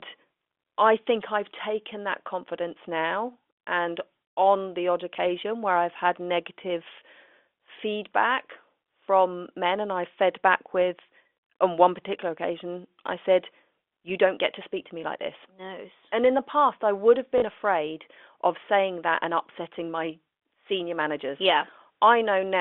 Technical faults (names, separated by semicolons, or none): packet loss with last packet repeated